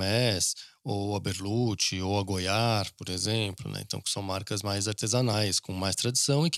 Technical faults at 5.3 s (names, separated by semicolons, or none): damaged data in a compressed stream